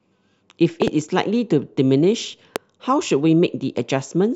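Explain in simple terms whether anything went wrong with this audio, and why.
Loud pops occur from 0.82 to 0.90 s (two quick pops) and from 2.56 to 2.58 s (one pop), each much louder than the speech. A sudden electrical jolt, likely from a plug, switch or static, was added on top while the speech continued underneath.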